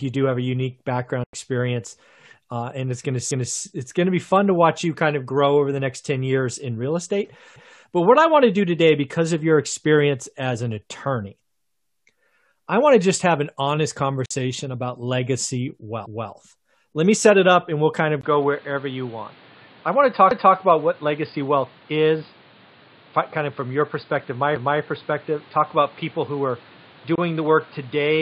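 Speech clip in which the Bluetooth link likely failed to deliver packets in time, cutting the sound to silence for about 93 ms at 1.24 s after "have a unique background", 46 ms at 14.26 s between "just have an honest" and "about legacy", and 23 ms at 27.15 s, each time resuming as if it had played on. Processing in 4-second overlapping chunks replays 250 ms at each join, causing stutters at 3.31 s after "uh and it's going", 16.06 s, 20.31 s and 24.56 s. At 18.21 s the input likely switched to a poorer device. After a 20 ms gap, the sound turns dull with nothing above 4.9 kHz and a new noise floor roughly 30 dB down, at much the same level.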